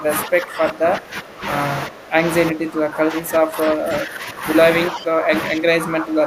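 Speech suppressed in double talk dips the speech by about 15 dB at 0–1.45, 1.88–2.21, 2.51–4.46, 4.9–5.33 and 5.5–6.26 s, likely an echo canceller turning down its own talker along with the loudspeaker echo; waveform sags.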